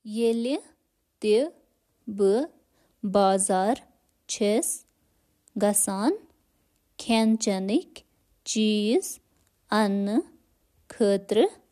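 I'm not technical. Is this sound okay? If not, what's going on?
Yes, this sounds fine.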